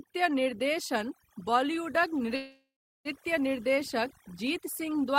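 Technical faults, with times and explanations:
throughout, overdone noise removal: The noise reducer is pushed far too hard, so every frequency band that sits close to its noise estimate is cut deep or switched off entirely. The background drops and breaks up into twinkling, warbling specks, and the quieter parts of the speech are stripped away along with the noise. The speech has its softer detail hollowed out.
2.35 to 3.08 s, call audio freeze: The last bit of sound is drawn out into a fading buzz or hiss, then about 0.35 s of that stretch drops to silence before the speech picks up exactly where it stopped. The cause is likely packets held up in transit until the jitter buffer ran dry, with the receiver filling the wait. Nothing is lost, but about 0.7 s of gap has been inserted, so everything after it runs that much later.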